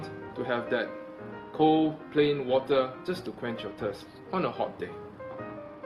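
From 1.04 s to the end, the audio suffers a call bitrate drop: the encoder's rate falls from 96 to 22 kbps, bottoming out for about 2.4 s. The sound turns coarse, watery and dulled as high frequencies vanish, with no gaps or dropouts as packet loss would cause.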